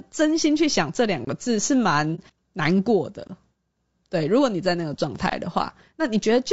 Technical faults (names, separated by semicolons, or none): low-delay AAC compression; gap between chunks; AAC frame loss with muting